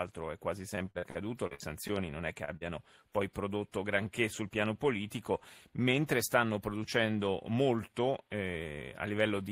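From 0.75 to 1.92 s the speech breaks up with repeated packet loss, giving the robotic sound typical of a stream losing packets again and again. The dropouts come close together, with around eight separate holes, the longest about 47 ms. Each one is patched by extending the preceding sound, so about 254 ms of the stretch, roughly 22 %, is synthetic fill, and about 160 ms of real speech is simply gone. The result is choppy, with fragments missing.

At 2.45 to 2.54 s there is a short stall from a late packet. The jitter buffer ran dry while a packet was overdue, so the receiver held the last sound for about 28 ms and then resumed from the same point once it arrived. No speech is lost, but the playout delay grows by about 28 ms and about 11 ms of extra time is added. It is heard as a slightly held, faintly buzzy moment.

Right after, from 2.57 to 2.64 s, comes a short concealed packet loss. 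About 40 ms of audio never arrived in time and was replaced by about 42 ms of continuation built from the preceding sound, blended back into the real signal. It comes across as a brief smear or wobble, and whatever fell in that gap is absent.

Two jitter buffer speed-ups follow. From 3.73 to 4.50 s the speech runs at about 104 % speed, and from 6.60 to 6.82 s at about 114 %. In both, the receiver was holding more audio than its target and trimmed around 40 ms by cutting out short pitch-period pieces. Pitch stays put. The first stretch is only slightly faster, while the delivery in the second, sharper stretch sounds hurried.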